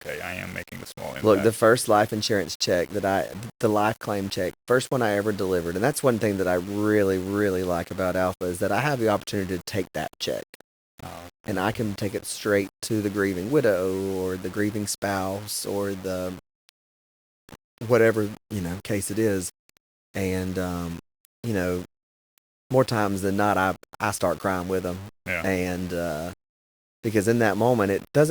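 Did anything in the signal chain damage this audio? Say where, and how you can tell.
Yes. The speech carries low bit depth without dither throughout, likely from a sample-format conversion that rounded it to about 6 bits. Quiet passages sound gritty and grainy, the error sitting only about 20 dB below the speech and tracking it, and soft tails sputter or snap to silence. A zoomed waveform shows coarse staircase steps; a spectrogram shows broadband hash that rises and falls with the voice rather than a steady noise floor.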